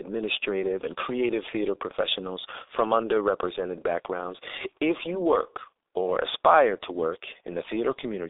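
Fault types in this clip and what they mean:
G.723.1 codec: This narrowband telephony codec squeezes the speech to about 6.3 kbit/s, working in 30 ms frames with a slowly updated vocal model, so the damage here is heavy. The voice sounds muffled and hoarse, consonants smear together, and sibilants lose their bite. On a spectrogram the energy sits in a band of roughly 300 Hz to 3.7 kHz, with nothing at all above 3.8 kHz, a flat empty ceiling across the whole clip.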